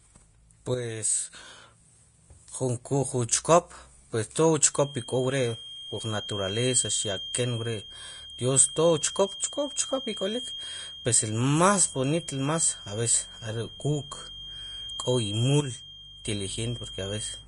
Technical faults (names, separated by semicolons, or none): Vorbis compression; sudden gain jump; feedback whistle